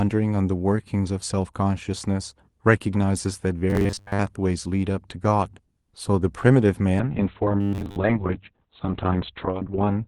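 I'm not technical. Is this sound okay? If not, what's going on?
No. There are two problems. From 3.70 to 4.19 s, and again from 7.61 to 7.96 s, the speech turns into a stiff, metallic buzz. This is robotic sound from repeated short buffers. The likely cause is new audio arriving too late, so the software keeps replaying a tiny slice of about 10 ms. That repetition imposes a steady 100 Hz drone, and most of the real sound in those moments is skipped.

The second problem is a call bitrate drop. From 7.0 s to the end, the call was forced to send far less data for about three seconds. The encoder codes more coarsely, so the speech sounds rough and watery. It also discards everything above about 4 kHz, down from about 12 kHz on the normal call path, so the voice also turns muffled and dull.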